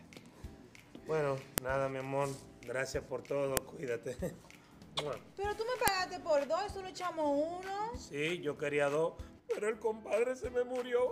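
File header played as audio produces sharp, loud clicks at 1.58 s, 3.57 s and 5.88 s, each lasting about a millisecond. Separate pieces were joined without stripping their WAV headers, so those few dozen bytes of header data are played back as samples, snapping through regardless of the surrounding sound.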